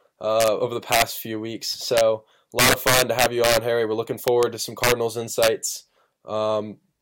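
A speech clip with integer overflow: loud peaks exceed the integer limit and wrap to the opposite sign, producing violent cracks at 0.40–0.48, 0.92–1.02, 1.97–2.01 (after "few weeks"), 2.59–3.57, 4.28–4.43 (before "to some"), 4.84–4.92 (after "to some"), and 5.43–5.48 s. The overdrive is up to about 7 dB, worst in the long 2.59–3.57 s stretch.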